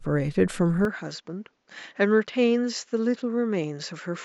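Speech that, from 0.85 s to the end, sounds as if the input switched to a poorer device, likely a change of microphone or a headset dropping into its call profile. At that point the band suddenly stops at about 7.6 kHz, so the voice loses its air and turns duller, the level falls by roughly 5 dB, and a faint new noise floor appears, about 50 dB below the voice. The change is instant, with no gap of silence at the switch.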